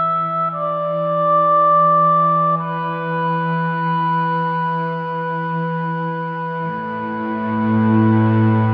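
Nothing technical goes wrong anywhere in this music, so there's no fault to point to at any moment.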